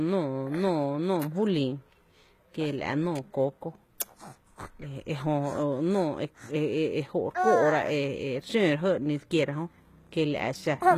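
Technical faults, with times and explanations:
Throughout, HE-AAC compression: the speech has a synthetic-sounding treble, with s sounds turning gritty and lispy, and nothing at all above about 14.9 kHz. The damage is plainly audible and likely comes from an encoder working at a rate near 20 kbps. It codes only the lower spectrum and rebuilds the top by copying lower bands upward, so the treble is present but its harmonics no longer line up. A plain low-pass filter would instead leave the top dull.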